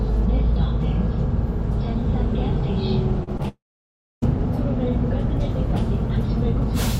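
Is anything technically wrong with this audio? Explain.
Yes. There are two kinds of fault, clustered between about 3.2 and 4.2 s.

Short concealed packet loss occurs twice, at 3.23–3.29 s and at 3.37–3.41 s. About 40 ms and then 20 ms of audio never reached the decoder in time. The receiver patched each gap by extending the preceding sound and then cross-fading back into the real signal. Each patch is heard as a brief smear or wobble in the sound rather than a clean continuation.

A long network dropout follows at 3.48–4.24 s. It is likely caused by a stretch of about 740 ms of audio that never arrived. The receiver first carries the last sound forward as a fading buzz or hiss, and then roughly 640 ms of silence remains. The audio resumes at 4.24 s, but the portion lost in the gap is simply absent, so the sound jumps ahead.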